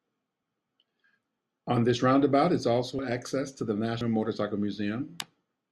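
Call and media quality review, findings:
Speech, forward jumps at 0.43, 2.99, 4.01 and 5.21 s. No gap of silence; the sound skips ahead about 40 ms at three points, about a tenth of a second at 4.01 s. Likely dropped buffer (overrun) in the capture path: samples not read before being overwritten, so the two sides join directly. On the waveform, an abrupt step discontinuity. On the spectrogram, a thin full-band vertical line with harmonics jumping.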